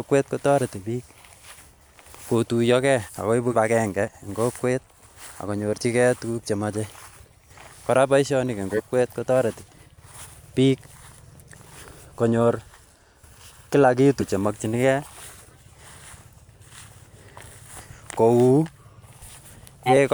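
The speech is interrupted four times, each marking a small forward jump. The first, at 3.51 to 3.55 s just after "kotuyogee ak koibu", loses about a tenth of a second. The others, at 8.71 to 8.80 s after "koraa boishonik en", 14.19 to 14.29 s and 19.86 to 19.93 s, each lose roughly half that. These are compressed frames skipped: whole frames were missing or rejected by the decoder.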